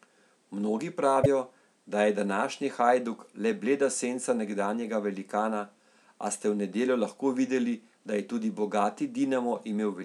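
At 1.22 s the speech jumps ahead and a brief glitch lasts until 1.26 s. The likely cause is a broken MP3 bit reservoir. Frames of about 26.1 ms were cut, so the next frame decoded borrowed bytes from the wrong frame.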